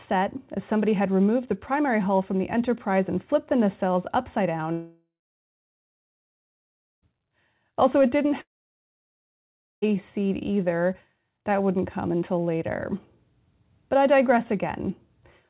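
Speech, with two gaps where the sound drops away. From 4.72 to 7.08 s, about 2.3 s of audio is missing. The last sound trails off as a brief, fading buzz, then about 1.9 s of near silence follows. From 8.41 to 9.84 s the same thing happens over about 1.4 s, with roughly 1.36 s of silence. Speech resumes afterward without the lost part. This is likely a long network dropout on a call path whose narrowband codec leaves nothing above 4 kHz.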